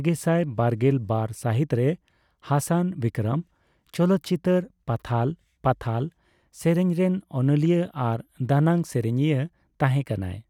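A speech recording with no technical faults to report. No dropouts, distortion or timing problems can be heard anywhere in the audio.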